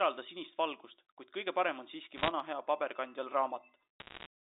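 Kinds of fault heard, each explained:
Bit errors on a digital phone line: flipped bits in the G.711 stream corrupt single samples, leaving brief bursts of sharp crackling ticks near 2.2 and 4.0 s.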